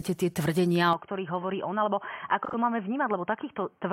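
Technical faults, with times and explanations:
0.93 s to the end, input switched to a poorer device: right after "tie tvrdenia" the sound turns dull and boxy, cut off above 3.2 kHz and about 5 dB quieter, with faint new hiss, likely a device change.
2.45 to 2.54 s, AAC frame loss with concealment: an 85 ms smeared, phasey patch where the decoder filled in from the previous spectrum, which fits two lost frames.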